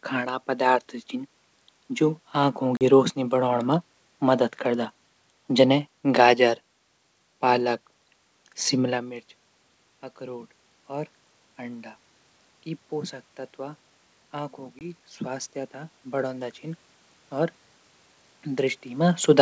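Packet loss on an ADPCM call at 2.77 to 2.83 s, after "जू आंखो" and before "रोशनी बढाण मा मदद", and at 14.79 to 14.88 s punches hard-edged silent gaps. The decoder's predictor and step size then drift out of step with the sender's, so the speech resumes slightly distorted.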